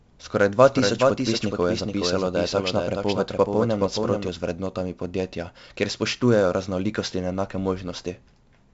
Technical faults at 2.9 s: 4-bit ADPCM compression; doubled audio track

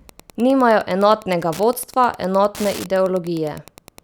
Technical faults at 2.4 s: Wi-Fi interference

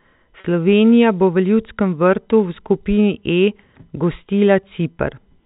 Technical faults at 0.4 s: packet loss with pitch repetition

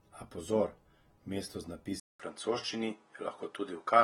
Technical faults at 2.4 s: AAC compression; input switched to a poorer device

